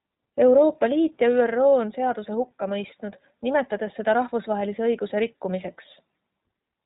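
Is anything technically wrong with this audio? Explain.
Yes. Throughout the speech the sound is narrow and boxed-in, with nothing above about 3.8 kHz, and it has a plainly audible rough, slightly synthetic grain. This is the iLBC codec at work. It codes each short frame's excitation on its own, without drawing on the frame before, and the roughness fits its 20 ms mode at roughly 15 kbps. The loss of the upper band and the texture both come from that narrowband, frame-by-frame coding.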